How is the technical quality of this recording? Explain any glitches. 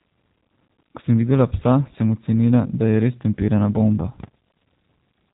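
The recording has been through G.729 codec compression for its full length. The G.729A encoder discards the waveform and rebuilds speech from a vocal tract filter, a pitch predictor and a few pulses per 5 ms subframe, at a rate consistent with 8 kbit/s. Everything above about 3.8 kHz is gone, so speech sounds narrow and telephone-like. The damage is plainly audible: voices come across rough and slightly synthetic, though intelligible.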